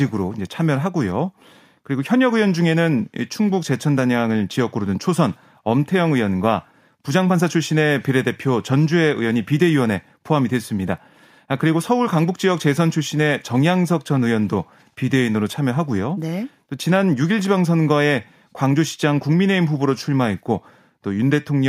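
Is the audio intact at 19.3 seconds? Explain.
Yes, the audio is intact at 19.3 seconds, with no dropout, glitch or other technical fault at that point.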